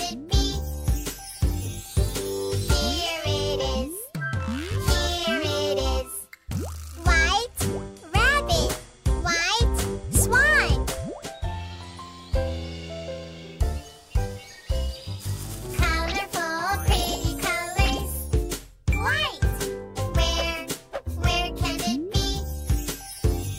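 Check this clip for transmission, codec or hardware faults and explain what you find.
Nothing stood out on listening to this clip.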